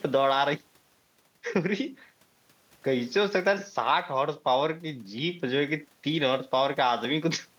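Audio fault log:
No technical faults can be heard anywhere in this speech recording.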